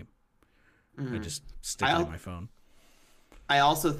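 Nothing stood out as a technical fault on listening to this speech recording.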